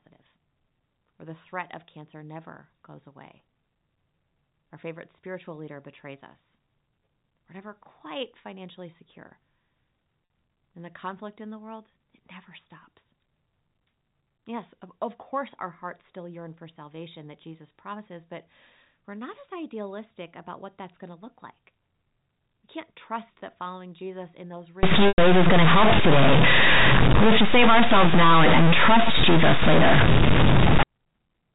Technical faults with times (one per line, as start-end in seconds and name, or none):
1.85-1.87 packet loss with pitch repetition
10.26 packet loss with pitch repetition
24.83-30.83 stuck bit
25.08-25.18 packet loss with pitch repetition